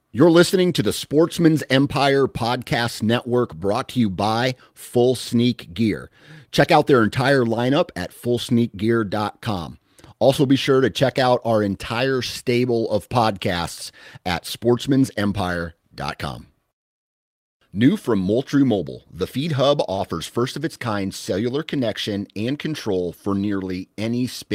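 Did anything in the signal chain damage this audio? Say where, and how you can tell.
Yes. At 19.95 to 20.0 s, just before "first of its kind", the network path dropped about 20 ms of audio and the receiver's short concealed packet loss kicked in. It extended the preceding sound for about 21 ms and crossfaded back, leaving a brief smear.

Overlapping that, from 19.98 to 20.0 s, is a lost packet rebuilt from error correction. One packet went missing, but the next carried a low-bitrate redundant copy. The decoder played those 20 ms from it, so there's no gap, but the frame sounds rougher and noisier.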